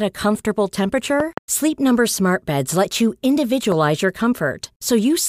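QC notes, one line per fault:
1.20–1.40 s, loud pop: two sharp pops, about 15 dB above the speech, which continues underneath. This is likely a voltage spike from a plug, switch or static.
3.72–3.74 s, loud pop: a single sharp pop, about 10 dB over the speech, which continues beneath it. The likely cause is another brief electrical pulse added to the signal.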